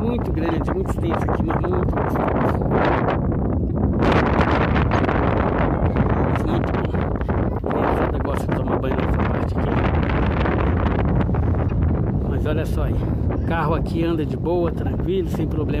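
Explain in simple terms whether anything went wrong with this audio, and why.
A corrupt frame decoded problem occurred four times. Some of the compressed data was damaged, but the player decoded those scrambled pieces anyway, so sound energy landed at the wrong pitches. Each time you hear a short chirp, blip or burst of noise: very briefly at 0.51 s and 4.89 s, a little longer from 3.69 to 3.72 s, and the longest and loudest from 11.64 to 11.71 s.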